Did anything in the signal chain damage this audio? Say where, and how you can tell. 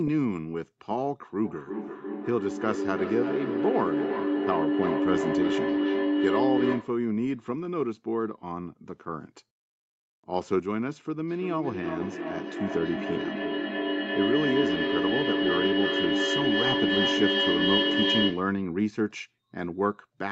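Yes. A feedback howl runs from 1.45 to 7.1 s. The stage is acoustic, outside the chain: two devices in one room on the same call, their microphone-to-loudspeaker loop gaining level each trip. The repeats grow rather than fade. They narrow to a tone around 300 Hz that the loop favours. The tone pulses roughly every 300 ms, the loop's round-trip delay. It peaks about 1 dB above the speech.

Feedback echo between two devices appears from 11.28 to 18.64 s. The same two-device loop is the cause. One device plays what the other's microphone sent, and that microphone picks it up again. Each echo canceller only removes its own device's playback, so this path escapes both. The sound returns at a steady interval of roughly 300 ms, thinner and more ringing each pass. The repeats pile up, reaching about 1 dB above the speech. The Opus call path also limits the bandwidth to 8 kHz.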